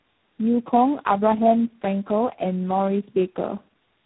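Tandem speech coding runs throughout: three codecs in a row each re-encode earlier damage, so speech sounds rougher and more warbly than one codec alone.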